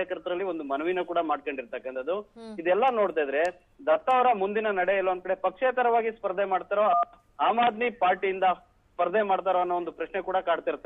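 No technical faults can be heard anywhere in the recording; the signal stays steady and intact throughout.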